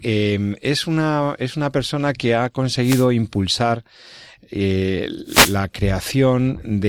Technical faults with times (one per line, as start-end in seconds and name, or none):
2.82-3.07 wireless microphone noise hit
5.26-5.58 wireless microphone noise hit